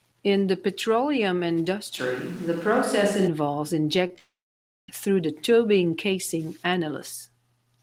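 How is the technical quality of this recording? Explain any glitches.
The recording has two clear problems in the middle: a sudden change in sound character, then a burst of network damage ending in a gap.

From 2.00 to 3.26 s, just after "the petroleum", the voice turns hollow and roomy, with thinner bass and more room noise, roughly 25 dB below the speech. The level stays about the same. The likely cause is a switch to a distant microphone. When the close microphone's feed drops out, a farther pickup such as a camera mic takes over, and it captures more reflections and ambience than direct sound. The change in and out is abrupt.

Between 4.07 and 4.18 s there are three quick smears or wobbles, at 4.07–4.10, 4.13–4.15 and 4.16–4.18 s. These are short concealed packet loss. Each time, 10 to 20 ms of audio failed to arrive, and the decoder covered the hole by extending the preceding sound for about 10 to 17 ms before blending back into real audio. 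Brief sounds falling in these gaps can be lost.

The last of those hiccups runs straight into a long network dropout, which is the likely cause of the gap from 4.18 to 4.89 s. At first a synthetic continuation of the last sound fades out. After that, about 0.55 s of silence remains. Roughly 0.7 s of the stream never arrived, so the speech resumes further on with that stretch missing rather than delayed.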